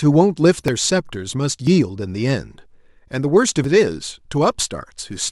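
Speech clip with audio missing between chunks: tiny skips at 0.68, 1.67, 3.64 and 4.63 s, each dropping a sliver of sound with the edges butted together. The spacing in roughly one-second steps likely comes from a recorder losing samples each time it hands off a one-second chunk.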